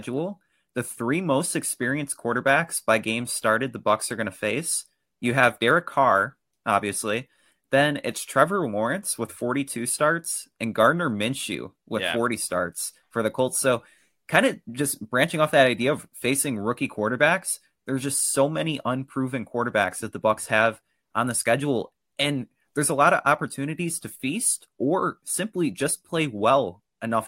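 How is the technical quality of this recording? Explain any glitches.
The technical quality of this recording is good, and there are no glitches to explain.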